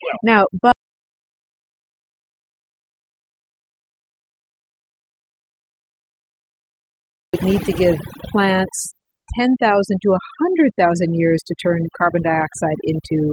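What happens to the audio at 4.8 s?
It's deep in an audio dropout to silence running from 0.72 to 7.34 s: dead silence with no room tone at all, likely because the input was lost while the recorder kept writing. Sound comes back at "need to give plants". Around it, overdone noise removal is clamping quiet frequency bands shut, leaving a lowered background broken into twinkly specks.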